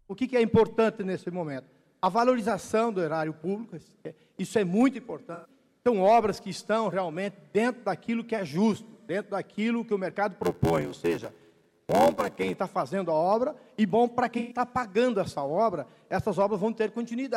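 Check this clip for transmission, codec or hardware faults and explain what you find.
Two kinds of fault are present: AAC frame loss with concealment on two occasions, and a block size mismatch with padding.

AAC frame loss with concealment occurs at 5.34 to 5.50 s and again at 14.38 to 14.58 s, gaps of about 0.11 s and 0.13 s that fit roughly five and six lost frames. The decoder rebuilt each gap from the last good spectrum, so each patch sounds smeared and noisy rather than silent. Unlike a plain dropout, it never goes completely quiet.

The block size mismatch (padded) runs from 10.42 to 12.54 s. One stage delivers short blocks to a reader expecting full ones, which fits a 512-sample read, and the remainder is filled with zeros. This produces an 86.1 Hz buzz and slows playback to 0.861 times normal speed at about the same pitch. Tape-style slowdown would lower the pitch, but here the timbre stays.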